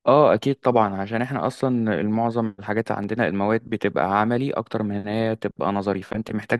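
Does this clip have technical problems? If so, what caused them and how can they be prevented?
Yes. A repeated buffer occurs at 3.03 s. Fresh audio failed to reach the device in time, so it replayed the previous block once, which fits a 10 ms buffer. The short piece sounds twice with a hard join, heard as a click or brief buzz, and roughly 10 ms of audio goes missing. A larger playback buffer or a higher-priority audio thread would prevent this.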